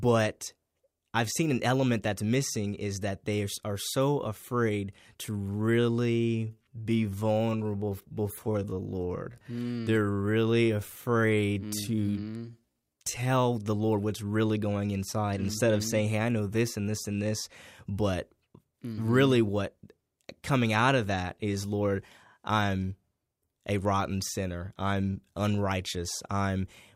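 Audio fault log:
5.39 to 13.29 s, time-stretched section: Right after "are so afraid to", the speech suddenly slows to about 0.66 times its normal pace, yet the pitch does not drop. It drags, with drawn-out syllables. This is likely software lengthening the passage to fill a set duration. It held the pitch by repeating short slices of the audio. Normal pace returns at 13.29 s.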